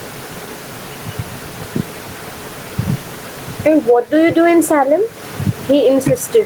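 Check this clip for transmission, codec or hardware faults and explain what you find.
One fault runs through the whole recording: gain pumping. The likely cause is input gain set far too high for the microphone, with a fast limiter or compressor clamping down each time the speech gets loud. Across the clip the level swings by around 10 dB. The room noise sits about 32 dB below the speech. The speech sounds squashed, with loud and soft passages pushed close together.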